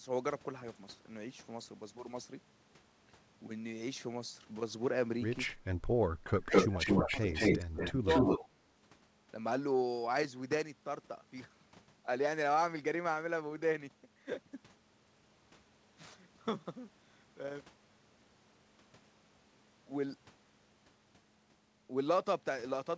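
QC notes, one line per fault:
5.87–5.95 s, 6.22–7.39 s, 7.69–7.84 s, 8.01–8.28 s, speech suppressed in double talk: level dips and breaks up, from about 10 dB briefly to about 30 dB deep, likely the echo canceller ducking overlapping talk.
6.36–8.49 s, echo leak: a copy of the speech returns 209 ms late, at roughly 5 dB above speech level, likely far-end loudspeaker pickup the echo canceller failed to remove.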